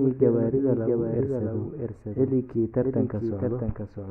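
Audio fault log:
Throughout, doubled audio track: a second, dry copy of the speech trails roughly 0.7 s behind at about 5 dB lower, likely from a parallel capture path.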